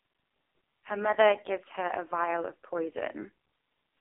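Throughout, heavy AMR narrowband mobile codec damage squeezes the speech into 300 Hz to 3.6 kHz and leaves it buzzy and synthetic, unlike clean filtering. This fits its 4.75 kbps mode.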